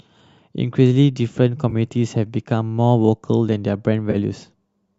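AAC frame loss with concealment at 1.70 to 1.73 s and 4.11 to 4.16 s: the decoder rebuilt 20 ms and then 30 ms of missing audio from the last good spectrum, which fits two and three lost 10 ms frames. Each gap comes out as a brief smeared, phasey patch against the light graininess of what is likely low-delay AAC coding underneath.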